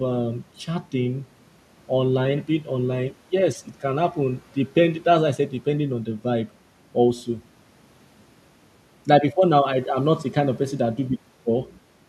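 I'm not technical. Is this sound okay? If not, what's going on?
Yes, the recording is technically sound, with nothing in it that points to a recording or playback problem.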